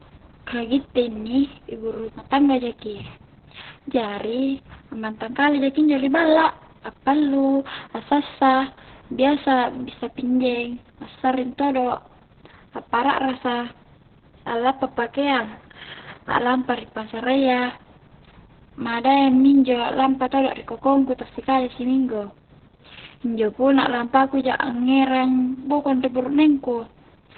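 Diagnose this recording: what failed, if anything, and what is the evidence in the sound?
Opus voice compression runs throughout this speech, a codec-stage fault. Nothing is audible above 4.2 kHz, so the speech sounds muffled, hoarse and slightly robotic. That narrowband SILK coding points to a very low bitrate, around 6 kbps, where the excitation is coded coarsely.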